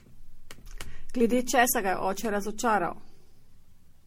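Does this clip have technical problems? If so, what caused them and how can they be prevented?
Yes. Throughout, the speech sounds swirly, hollow and smeared: likely generation loss, with around seven MP3 passes near 64 kbit/s compounding requantisation noise. A spectrogram shows nothing above 16.5 kHz. To prevent it, keep a lossless master and encode to MP3 only once.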